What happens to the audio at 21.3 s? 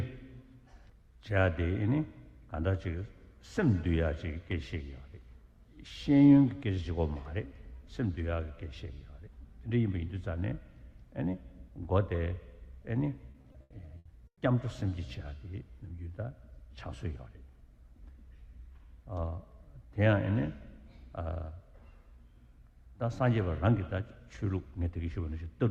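Nothing goes wrong at 21.3 s; the audio runs through that moment intact.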